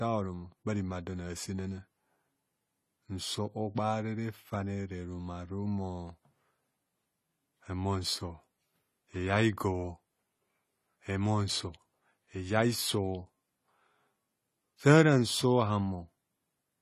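From start to finish the speech is dull and smeared, with nothing above about 14.1 kHz and a watery, warbling texture on sibilants and held sounds. The fault is likely AAC compression at a low bitrate, which fits around 32 kbps AAC-LC. Short of bits, the encoder quantises the spectrum coarsely, drops the top band and leaves gaps between frequency lines, so the damage is plainly audible throughout.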